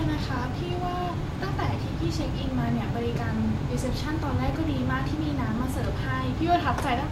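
Speech, with two loud pops riding on top of it. The first is a single sharp pop from 3.16 to 3.18 s. The second is a pair in quick succession between 4.48 and 4.57 s. Each reaches roughly 10 dB above the speech, which continues unbroken underneath. The likely cause is a sudden voltage step or pulse entering the signal path, such as a connector being disturbed, a switch, static discharge or a driver glitch, shaped by the downstream circuitry into an audible transient.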